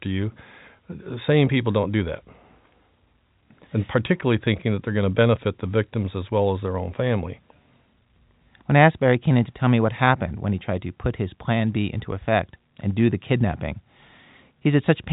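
No technical faults occur in this speech, which comes through G.711 telephone coding with nothing above 3.8 kHz.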